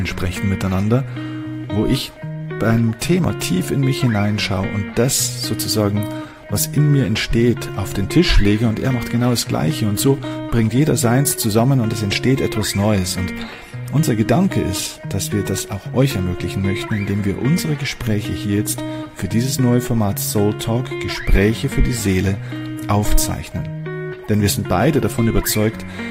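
Nothing here goes wrong: there are no dropouts, glitches or other technical faults anywhere in the clip.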